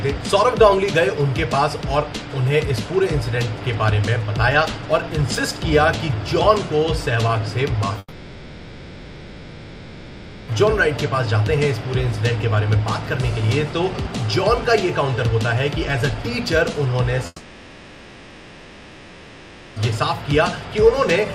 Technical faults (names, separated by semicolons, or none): long network dropout